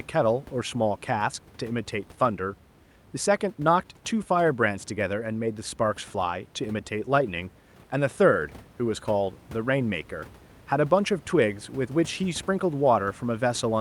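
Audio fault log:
Nothing to log here: the speech comes through without a single fault, with just a little room noise in the background sitting about 24 dB below it.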